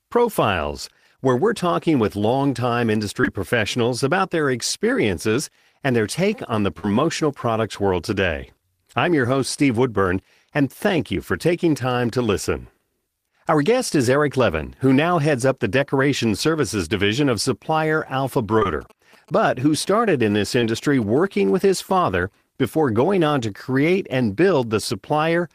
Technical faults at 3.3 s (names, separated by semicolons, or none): short concealed packet loss